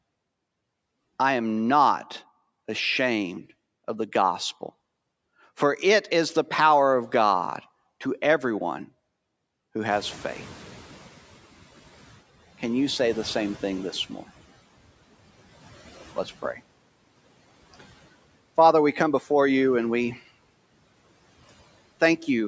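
From 9.9 to 12.21 s, background noise jumps by about 20 dB and comes through with less reduction at first before sinking over 2.31 s, by about 12 dB: the noise suppressor is catching up to the new level. Between 16.16 and 16.6 s, parts of the speech sound swallowed, dipping by up to about 9 dB over around a tenth of a second in total, because the noise suppressor cut speech it took for noise.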